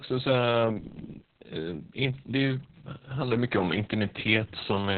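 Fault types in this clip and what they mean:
Opus voice compression: throughout, the speech is muffled, hoarse and slightly robotic, with nothing above 4.3 kHz, which fits Opus's SILK speech coder in narrowband mode near 6 kbps. Unlike a plain low-pass filter, the coarsely coded excitation also makes the voice itself rough and buzzy.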